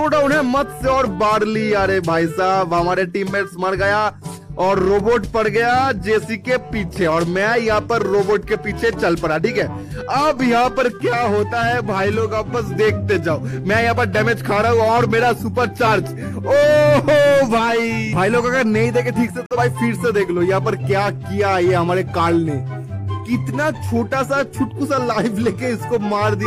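At 19.46 s the sound cuts abruptly to silence for about 0.1 s, fitting one corrupt frame muted by the decoder. Timing resumes unshifted, unlike a dropout that delays playback.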